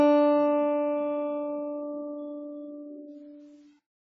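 Throughout the music, the sound is dull and smeared, with a warbling, fizzy texture and nothing above 7.5 kHz. On a spectrogram this shows as a flat ceiling and patchy holes between bands. It is likely heavy AAC compression, pointing to roughly 16 kbps.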